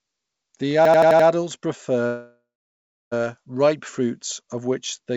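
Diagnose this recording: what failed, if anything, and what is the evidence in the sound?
System hang loop, driver or buffer stage: from 0.85 to 1.28 s one 85 ms slice of speech repeats five times, a machine-gun stutter at about 11.7 Hz. The hardware kept replaying its ring buffer while the host stalled, which fits a 4096-sample buffer. Essentially no audio is lost.

Call audio freeze, network and call-processing stage: from 2.07 to 3.14 s the speech stops and the last sound is stretched into a fading fill, with about 0.66 s of near-silence. Speech then resumes where it left off, 1.05 s late, with nothing missing. The likely cause is delayed packets draining the jitter buffer on this band-limited call path, which carries nothing above 8 kHz.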